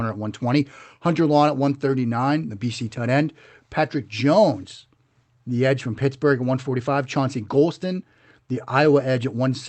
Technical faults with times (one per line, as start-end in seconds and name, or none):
none